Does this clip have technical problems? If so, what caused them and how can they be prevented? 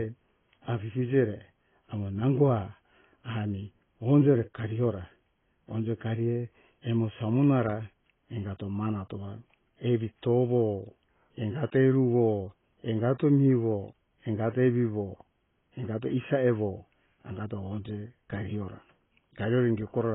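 Yes. Throughout the speech, nothing is present above 3.8 kHz, and sibilants and held sounds have a smeared, warbling fizz. The likely cause is heavy AAC compression at a rate that fits about 16 kbps, where the encoder drops the upper bands and starves the rest of bits. A spectrogram shows a hard ceiling at 3.8 kHz. Encoding at a higher bitrate, or keeping the audio uncompressed until final delivery, prevents this.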